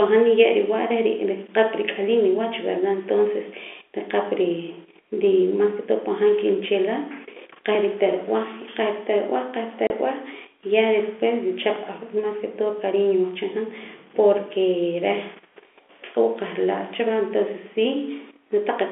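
At 9.87 s the speech drops out for 30 ms. This is packet loss filled with silence. A stretch of audio never reached the receiver, and it played nothing in its place. The gap length fits a single lost 30 ms packet. The hole has hard edges where the sound cuts off and where it resumes at 9.90 s. All of this sits inside narrow telephone-band audio that points to G.711 coding.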